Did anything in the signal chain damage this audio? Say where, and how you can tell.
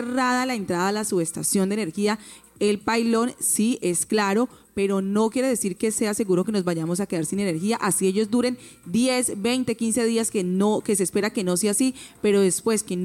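No, nothing in the signal chain stood out as having damaged this audio on listening.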